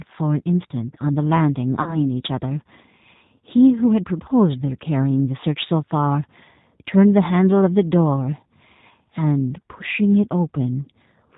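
The whole clip carries plainly audible G.729 codec damage: nothing above 4 kHz, and the speech sounds a bit rough and synthetic, typical of 8 kbit/s G.729A. From 1.82 to 1.98 s there's VoIP packet loss concealed by the speech codec. About 40 ms went missing, likely two 20 ms packets, and the decoder stretched the last sound into a fading buzzy tone or coloured noise, with the voice staying weak or distorted for tens of milliseconds afterwards.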